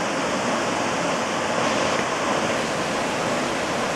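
From 2.56 s to the end of the clip, periodic clock jitter sets in. The converter's sampling clock is being shaken at a steady rate of around 1 kHz. Every component of the sound picks up copies about 1 kHz above and below it. The higher components are hit hardest. The result is a rough, metallic edge laid over the sound. It rides on the signal itself and disappears wherever the sound stops.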